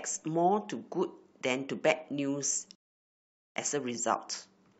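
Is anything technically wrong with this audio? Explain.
Yes, there is a rebuffering stall from 2.75 s to 3.56 s. Playback outran the downloaded data, so the player emptied its buffer and halted until more audio arrived. The speech drops to silence for about 0.80 s, then picks up at exactly the point where it stopped. No speech is skipped or repeated; the gap simply inserts dead air into the flow, stretching the clip's timing and breaking the natural rhythm of the delivery.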